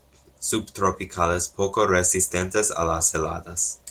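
Nothing in this speech clip stands out as a technical fault; it carries the faint, light touch of Opus voice coding and nothing more.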